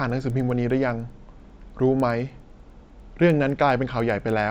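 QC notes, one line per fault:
Throughout: resampler restarted on every block. Each 100 ms block was converted alone, so its edges lack real neighbouring samples, leaving a small error that ticks at 10 Hz under the speech and drops away in pauses. Spectrogram: vertical lines every 100 ms. Waveform: small steps.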